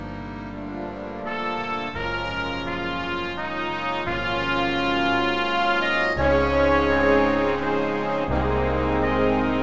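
There are no technical faults to describe in time order; the audio has come through a G.722 call path at 64 kbps, so nothing is heard above 8 kHz.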